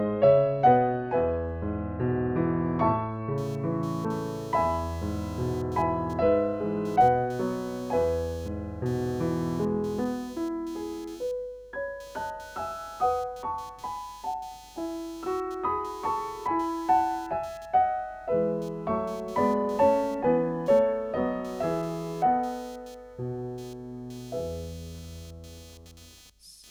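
From about 3.38 s right to the end there's computer activity noise: a buzzy, chirping scratch pulsing at around 300 Hz, roughly 25 dB under the sound. Processor or graphics load is shifting the shared ground, so it tracks the machine's activity rather than the audio.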